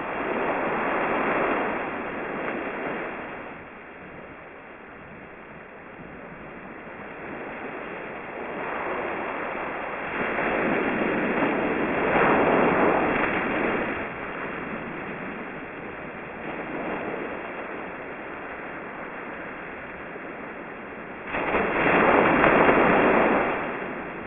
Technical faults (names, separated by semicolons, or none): aliasing